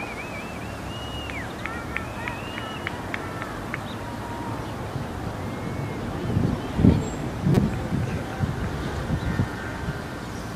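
A corrupt frame decoded from 7.54 to 7.57 s produces a brief, harsh blip lasting about 30 ms. Bits inside what sounds like a couple of compressed frames were damaged, and the decoder played them anyway. Misread codes and wrong gain values scattered energy into frequencies that don't belong to the surrounding sound. The result is a sharp chirp-like burst, peaking loudly at about -5 dBFS.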